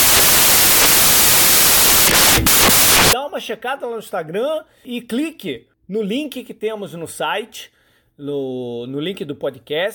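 From the start to 3.13 s the speech is buried under samples built from the wrong bytes: each value is assembled with its bytes swapped or shifted, so the busy low bits dominate. This loud, harsh noise clears just before "uma checada lá no".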